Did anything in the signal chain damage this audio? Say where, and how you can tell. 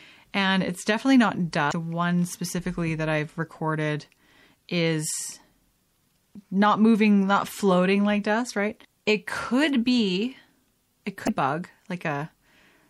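Yes, at the codec stage, all the way through. The whole clip has plainly audible watery, swirly artefacts, with the s sounds chirping metallically. That's likely MP3 compression, and the damage level fits around 64 kbps, starving weak frequency lines.

There's also damaged data in the compressed stream, from storage or transfer, heard as short glitches at 1.69 to 1.73 s and 11.25 to 11.29 s, about 40 ms each. The decoder hits bad bytes, loses frame sync and jumps to the next header.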